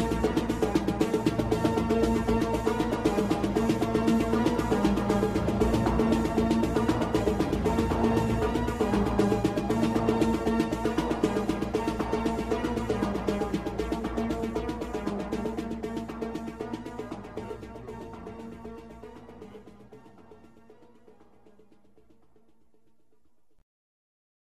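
At 6.32 s the audio is briefly disrupted for about 40 ms. This is a corrupt frame concealed: a damaged AAC stretch, which fits roughly two frames, was detected by the decoder and masked by muting or a scrambled copy of the preceding spectrum.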